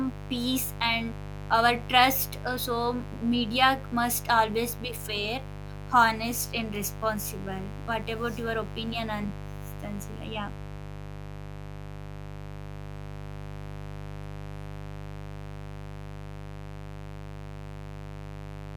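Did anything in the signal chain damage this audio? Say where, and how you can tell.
Yes. A steady, raspy buzz runs under the speech for the whole clip, and it is loud, only about 10 dB below the talker. This is mains buzz picked up in the analogue wiring. Its fundamental sits at 50 Hz, and a dense stack of harmonics climbs into the kilohertz range. That harsh edge points to sharp switching spikes, twice per mains cycle, from a dimmer, rectifier or unshielded cable.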